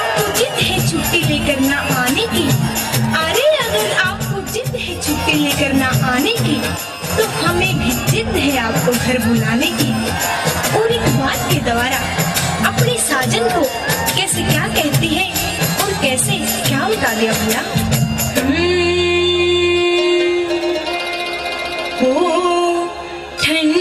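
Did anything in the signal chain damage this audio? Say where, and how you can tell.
Yes, there are two short level drops: from 4.17 to 5.06 s and again from 6.77 to 7.10 s, the audio falls abruptly by about 6 dB and then comes straight back, with no change in tone. That is the signature of one channel dropping out, likely a stereo channel cutting out somewhere before the mix to mono. With identical content in both sides, losing one halves the summed signal, hence exactly that 6 dB step.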